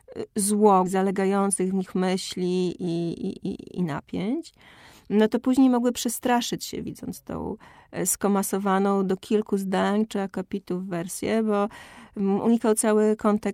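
At 0.85 to 0.87 s, a skip ahead: roughly 0.7 s of speech was discarded with no fill, so playback jumps forward, splicing the two sides almost directly. Then a jitter buffer speed-up: the receiver held excess audio and trimmed pitch-period slices, so speech from 0.95 to 1.87 s runs at 108% speed, losing about 70 ms, and from 2.73 to 4.21 s at 111%, losing about 150 ms, sounding hurried at unchanged pitch.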